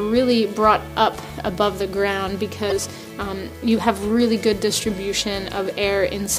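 Damaged data in a compressed stream appears at 2.68 s and lasts to 2.72 s, a span of roughly 44 ms. Some of the compressed bytes at that point are corrupted, so the decoder misreads the affected frames, loses its lock on the stream and has to hunt for the next valid frame header before it can resume. The result is a brief, harsh chirp or blip cutting into the sound before playback picks up again.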